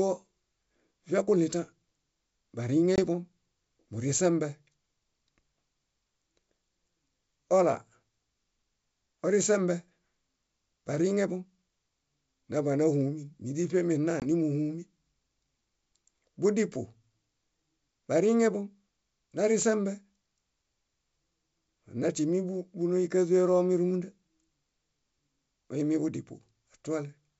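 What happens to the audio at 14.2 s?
Packet loss on an ADPCM call: from 14.20 to 14.25 s a hard-edged hole of about 20 ms, roughly one packet, replaces the sound with silence. The decoder's predictor and step size then lag the sender's, so the audio resumes with slight distortion before settling.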